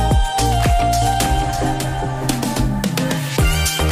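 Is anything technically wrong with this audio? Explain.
Yes. From 1.02 to 2.80 s, the sound is heard twice: a second full-band copy trails roughly 0.7 s behind, around 5 dB quieter, with no decay and abrupt edges. This doubled audio track likely comes from a second, slower capture path mixing in.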